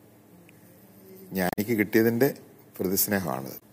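At 1.48 to 1.59 s, and again at 3.56 to 3.62 s, damaged data in the compressed stream breaks through as a brief chirp or blip. Corrupted bytes made the decoder misread those frames. It lost sync and hunted for the next valid frame header.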